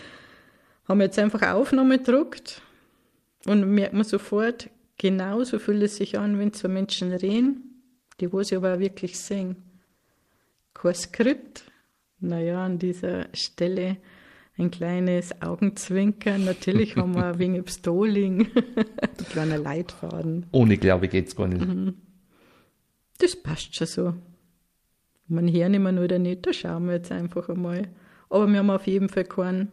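The audio runs fine until a call bitrate drop hits at 7.09 s. The encoder got squeezed onto far fewer bits, so the sound turns coarse and rough-textured. It sits at its worst for about 5.3 s, which fits the rate sliding from around 48 kbps down to roughly 15 kbps after the bandwidth estimate fell. Things recover by 14.93 s once the encoder gets its bits back.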